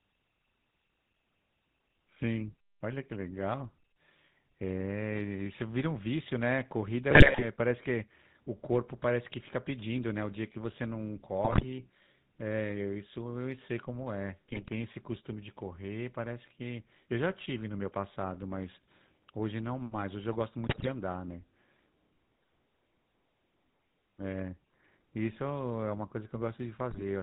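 From start to finish the speech carries the GSM full-rate codec. The voice is band-limited with nothing above 4 kHz, and it has a buzzy, gravelly roughness. At about 13 kbps the coder models the vocal tract as a filter and drives it with regularly spaced pulses, throwing away two of every three excitation samples. That is what separates it from plain low-pass filtering: the grit sits inside the voice itself, not just in missing treble.

GSM bit errors break through five times: 7.10 to 7.45 s, 11.44 to 11.65 s, 14.48 to 14.68 s, 20.66 to 20.89 s, and 26.90 to 27.02 s. Corrupted filter, pitch and gain values warp the spectrum and throw the level around frame by frame, so each burst comes out as squawks, pops and gargling. The error rate points to a few percent of bits flipped across short runs of frames. Unlike packet-loss gaps or concealment fades, these moments get stranger instead of going quiet.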